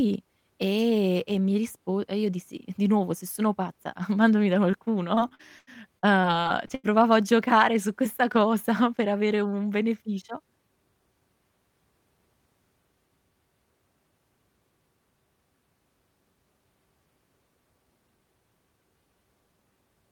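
At 4.71 to 4.75 s, right after "mandami da", there is a short concealed packet loss. A few hundredths of a second of the call arrived too late for the decoder. The receiver patched the hole by extending the sound just before it, for about 14 ms, and about 20 ms went missing outright. It is heard as a tiny smear or wobble.

From 5.15 to 6.86 s, ending just before "a giocare su questa", comes repeated packet loss with a robotic sound. Packets drop again and again here, leaving nine separate gaps. The longest lasts about 90 ms. Each gap is filled by stretching the last sound, and about 370 ms in total is synthetic. That is 22 percent of the stretch. The speech turns choppy, with fragments missing.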